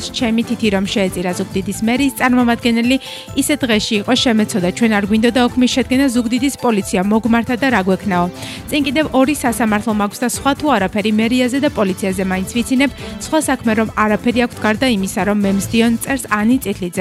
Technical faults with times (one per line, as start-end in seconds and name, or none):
none